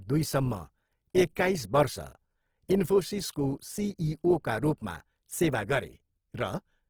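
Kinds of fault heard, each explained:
Opus compression: The speech sounds grainy and rough throughout, likely from Opus in its CELT mode at a rate near 16 kbps, which keeps each band's energy but fills fine detail with noise. A spectrogram shows content to 20.2 kHz with few holes, but harmonics blur into speckle.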